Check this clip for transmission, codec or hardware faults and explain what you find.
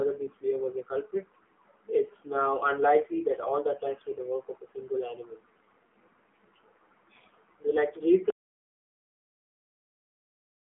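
Two faults are present: narrowband mobile coding throughout, and a dropout to silence at the end.

The AMR narrowband mobile codec runs through the whole speech clip. Nothing above about 3.5 kHz survives, and the low end is thin below 250 Hz, like a phone line. The coder models the voice as a filter excited by sparse pulses. At this low rate it strips detail. The damage is plainly audible. Voices sound buzzy, boxy and synthetic, which fits a low AMR-NB mode near 7.4 kbps.

An audio dropout to silence starts at 8.30 s and lasts to the end. The sound stops mid-flow. What follows is silence, with no room tone or hiss. The recorder kept writing samples after the input stopped delivering audio. The likely cause is a lost link, a disconnected device or a mute. Anything spoken in that stretch is gone.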